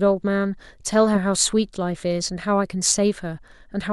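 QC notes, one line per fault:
0.82–3.83 s, clock slip clicks: about five faint, evenly spaced ticks roughly every 0.7 s through the speech. The steady spacing, with each tick consistent with a single sample being dropped or repeated, likely comes from two devices running on unsynchronised clocks about 30 ppm apart. Each time the drift adds up to a whole sample, the waveform jumps slightly, producing a small discontinuity heard as a tick.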